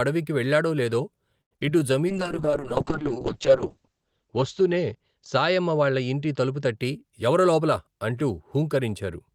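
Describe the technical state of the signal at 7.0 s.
A jitter buffer speed-up is under way at 7.0 s, running from 6.84 to 7.95 s. The receiver's buffer had built up more audio than its target, so it trimmed the backlog by cutting out short slices a pitch period or so long, over and over, removing about a tenth of a second in total. The speech plays at roughly 109% speed while keeping its pitch, which makes it sound briefly hurried.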